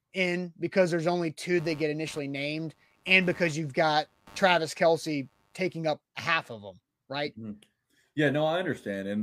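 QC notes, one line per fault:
1.58–5.76 s, computer activity noise: after "because there's only two", a buzzing around 100 Hz pulses sits about 30 dB below the speech, ending before "up half of them". Computer load changes shift the shared ground.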